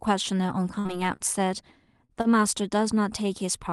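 At 0.79 s there is a burst of packet loss, running to 0.88 s. Several packets in a row never arrived in time. The receiver covered about 53 ms by carrying the last sound forward and fading it. That patch is a brief held sound that dies away. About 60 ms of speech is simply gone. The speech picks up later than it should, with a small jump.

Next come three short stalls from a late packet. They fall at 1.16 to 1.22 s, 2.05 to 2.14 s, and 2.21 to 2.28 s. Each time the jitter buffer ran dry. The receiver stretched the last sound for 28 ms, then 41 ms, then 35 ms, until the packet arrived. Nothing is lost. Each stall adds to the delay. A syllable is held too long, with a faint buzz or dip. Under all of this runs the usual coding noise of the call codec, with high frequencies ending near 12 kHz.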